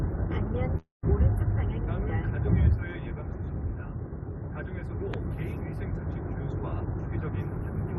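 Everyday sound carried over a call link, where the top end stops near 12 kHz, which fits Opus at about 32 kbps. From 0.77 to 1.05 s a call audio freeze likely occurred: packets were held up, the jitter buffer ran dry, and the receiver stretched the last sound into a fading buzz or hiss that ends in roughly 160 ms of silence. The audio then resumes where it stopped, so about a quarter-second gap is inserted and nothing is lost. At 5.14–5.16 s a single loud pop appears, pointing to a voltage step such as a plug, switch, static or driver glitch. It lands as one sharp click a few decibels above the surrounding sound, which carries on underneath.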